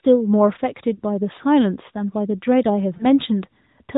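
At 0.96 to 1.00 s and again at 2.98 to 3.06 s, single lost AMR speech frames each leave a brief dip or warble. A 20 ms frame failed its check, so the decoder repeated the previous pitch and vocal-tract settings at reduced gain. The narrowband speech around the gaps is cut off above 4 kHz with only light codec coloration, which fits the 12.2 kbps mode.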